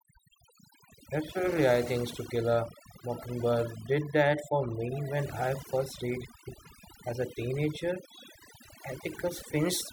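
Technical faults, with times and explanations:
Throughout: overdone noise removal. A noise reduction stage was set far too aggressively for this noisy speech recording, so it pulls individual frequency bands down hard or shuts them off whenever their level sits near its noise estimate. The quieter parts of the speech fall below that threshold and are removed along with the noise, leaving near-silent gaps sprinkled with twinkling, chirpy specks.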